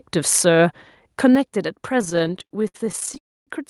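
From 0.32 to 0.39 s the loudest stretch of the speech sounds harsh and crackly: microphone overload. The input level was likely set too high, pushing peaks about 5 dB past the converter's ceiling so their tops were flattened, roughly half a percent of samples.

At 1.35 s the microphone volume steps down: speech and background noise drop together by about 6 dB in one abrupt step. This is likely automatic gain control in the call software cutting the device's input level after detecting the earlier clipping.

Between 1.99 and 3.18 s the audio suffers repeated stalls, a stutter of 27 short interruptions, the longest 61 ms. Late-arriving packets kept emptying the jitter buffer, and each time the receiver stretched the last sound while waiting. About 363 ms of filler, 31% of the span, drags the speech out, with nothing lost.

From 3.18 to 3.49 s there is a call audio freeze. The last sound extends briefly and fades, leaving about 270 ms of silence before speech resumes where it stopped. 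The likely cause is packets held up in transit, adding a 288 ms delay with nothing missing.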